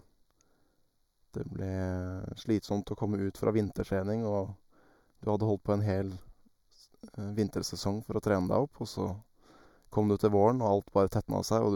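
Throughout the speech, channel delay causes comb filtering. One channel lags by roughly 0.2 ms, so mono summing cancels around 3 kHz first, leaving a hollow, phasey tone.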